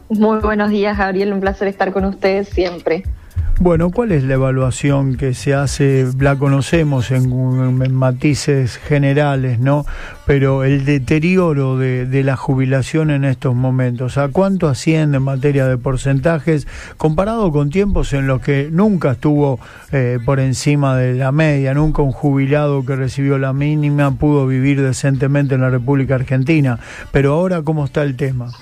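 No technical faults can be heard anywhere in this audio.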